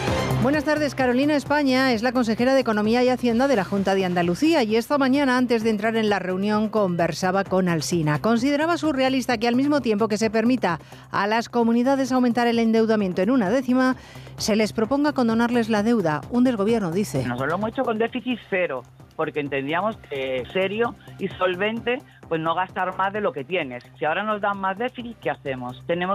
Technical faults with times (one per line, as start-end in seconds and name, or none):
none